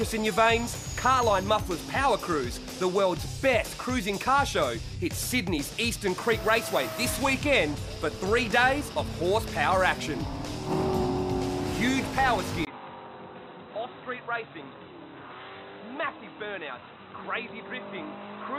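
At 12.65 s a brief 20 ms gap precedes an abrupt change: the sound drops about 10 dB, loses everything above 4 kHz, turns dull and boxy, and gains a faint new noise floor until the end. This likely reflects the input switched to a poorer device.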